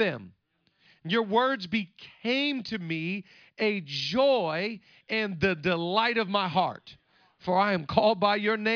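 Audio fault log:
No faults detected in the speech recording; nothing to log.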